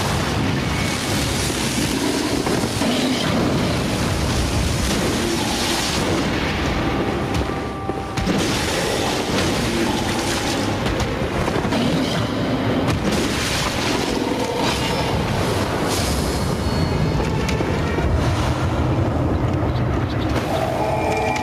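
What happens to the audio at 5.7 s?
Gain pumping is audible at 5.7 s, as it is across the whole clip. The likely cause is input gain set far too high with a fast limiter clamping every loud sound. The gain swings by around 15 dB, pulled down under each loud sound, leaving a squashed sound.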